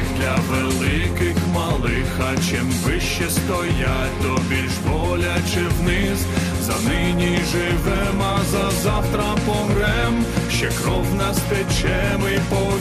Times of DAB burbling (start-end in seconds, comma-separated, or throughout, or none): 12.09-12.60